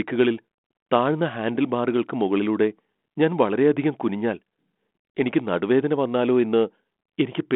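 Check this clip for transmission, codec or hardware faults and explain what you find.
No faults detected.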